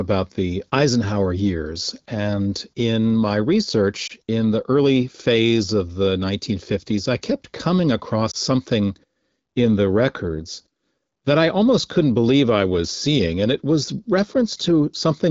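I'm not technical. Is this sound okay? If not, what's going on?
No, there are two tiny glitches called lost AMR speech frames. Around 4.07 to 4.12 s, just before "in the early phase", and again at 8.31 to 8.36 s, right after "I kept coming across", the phone call's decoder missed a single chunk of speech and briefly papered over it, leaving a short dip or wobble.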